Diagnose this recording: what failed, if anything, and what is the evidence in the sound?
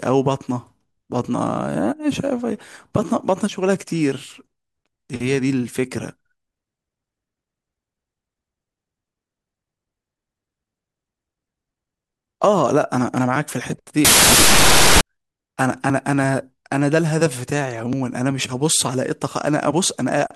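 Wrong sample width at the sample-format conversion stage, 14.05 to 15.01 s: 32-bit data read as 16-bit turns speech into loud broadband noise at half speed, an octave low, filling the spectrogram.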